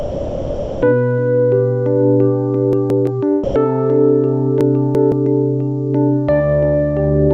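From 0 to 0.82 s the sound is replaced by steady comfort noise. This is likely sound dropped by the voice detector: the sender classed the opening as background and stopped transmitting until the detector triggered. From 2.73 to 3.07 s there are chunks out of order. A block of about 170 ms plays one slot late, so that stretch sounds jumbled. From 3.44 to 3.56 s, 120 ms of sound again gives way to comfort noise, the detector likely cutting out briefly. From 4.61 to 5.12 s a chunk arrives two slots late, producing a longer garbled passage.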